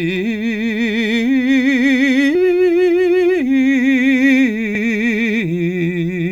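At 2.35 s the music skips forward abruptly. The same jump happens again at 4.75 s. Each time, about a tenth of a second of audio is gone. The two sides meet with no silence between them, so the music lurches rather than pauses. The regular spacing points to audio missing between chunks. The likely cause is a recorder working in blocks of about 2.5 s, dropping a short piece each time one block closes and the next opens.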